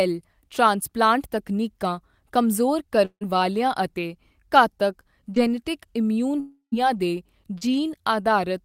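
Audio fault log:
3.05–3.23 s and 6.40–6.74 s, long network dropout: about 160 ms and then 320 ms of sound are missing, most likely because packets stopped arriving. Each gap opens with the last sound stretched into a fading buzz, then goes quiet for about 80 ms and 110 ms before the audio resumes past the lost section. A spectrogram shows smeared, repeating harmonics that thin out into a blank band. The waveform decays to a flat line.
5.35–5.38 s and 7.58–7.73 s, short concealed packet loss: about 20 ms and then 40 ms never reached the decoder. It filled roughly 11 ms and 33 ms by extending the preceding sound and blending it back in, which adds a slight timing stretch of around 10 ms in the later event. The result is a brief smear or wobble. On a spectrogram, harmonics briefly blur or flatten. The waveform shows a short stretch of continued sound with a soft join.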